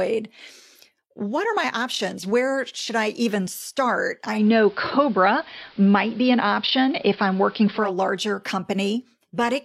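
At 4.30 s the speech goes through a digital radio blending to analogue: the receiver lost its digital stream and cross-faded, over about 200 ms, onto the station's AM broadcast. The top end vanishes, a hiss floor comes up, sitting maybe 30 dB under the speech, and the level shifts by about 4 dB. At 7.95 s it fades back to digital and the treble returns.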